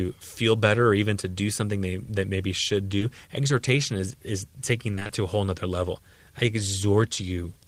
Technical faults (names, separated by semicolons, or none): short concealed packet loss; repeated packet loss (robotic sound)